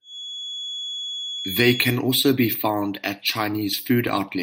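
A feedback whistle at 3.4 kHz sits about 10 dB under the speech from 0.0 to 2.0 s, likely a loudspeaker-microphone loop held just short of runaway.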